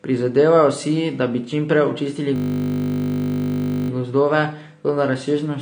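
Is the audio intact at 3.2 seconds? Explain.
No. From 2.36 to 3.9 s there is a system hang loop: the system froze while the hardware kept replaying one 20 ms buffer dozens of times, producing a steady 50 Hz buzz in place of speech. Normal audio resumes at "gozdove toda razsežnosti", with next to nothing missing. Through the whole clip, including this moment, the sound is dull and smeared, with plainly audible codec damage and nothing above 9.6 kHz. This is likely AAC compression, and the degree of damage fits a low bitrate of around 32 kbps.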